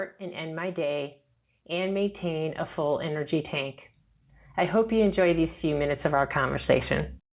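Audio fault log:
0.18–3.81 s and 4.71–7.19 s, automatic gain rising: the level climbs gradually by about 7 dB, then about 5 dB, with speech and background noise swelling together over seconds, unlike an abrupt step or a change in the talker's own loudness.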